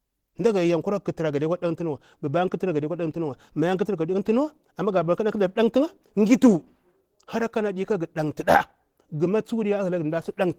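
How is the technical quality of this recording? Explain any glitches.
The recording carries plainly audible lossy-codec damage from start to finish, most likely Opus compression.

Opus compression runs throughout the speech. The coding points to a low bitrate near 16 kbps, with the encoder in its hybrid mode: a speech-oriented coder handles the lower band while a transform coder fills the upper band from band energies rather than exact detail. The result is a hoarse, rough, grainy texture on the voice. Content reaches up to about 22.6 kHz, so the band isn't audibly narrowed. Unlike MP3 damage, there's little swirling or watery warble, because the energy in each band is preserved instead of leaving holes.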